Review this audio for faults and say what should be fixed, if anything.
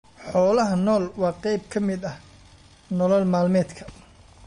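The speech carries plainly audible MP3 compression damage from start to finish, likely from a low-bitrate MP3 encode. Nothing is present above 10.6 kHz, where the encoder has cut the treble to save bits, and weak frequency lines drop in and out between frames, giving a watery, swirling texture with metallic chirps on s sounds and smeared attacks. The damage points to a bitrate of roughly 40 kbps. To prevent it, keep a lossless master and encode MP3 at 128 kbps or more.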